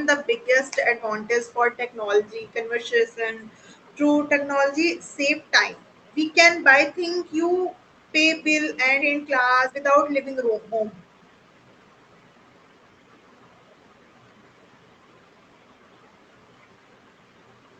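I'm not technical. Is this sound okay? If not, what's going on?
No. At 9.01 s there's a skip ahead: a chunk of the call audio, roughly 0.7 seconds, got dropped while newer audio was already waiting. Playback jumps straight past it with no pause, so that bit of speech is simply missing.

Right after, from 9.12 s to 11.72 s, there's a jitter buffer speed-up. The receiving end had built up too much audio, so it trimmed many tiny slivers to catch up, about a third of a second in all. Speech plays about 12% faster there and sounds hurried, though the pitch stays the same.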